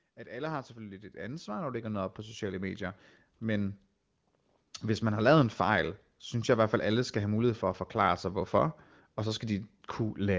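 From about 0.15 s to 3.85 s you can hear automatic gain rising: the control decided the speech was too quiet and kept pushing its gain up, by about 15 dB in all, so the voice and the room noise behind it swell together over nearly four seconds.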